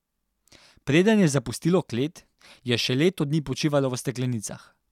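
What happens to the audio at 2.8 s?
At 2.8 s the speech carries on intact, with no dropout, click, distortion or other audible fault at that moment.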